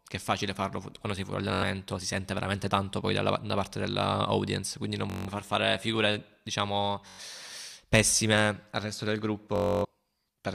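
Bluetooth stutter hits at 1.54–1.63, 5.10–5.28, 7.08–7.21 and 9.56–9.85 s: late packets make the receiver loop a tiny slice into a buzzy stutter, then the speech jumps ahead.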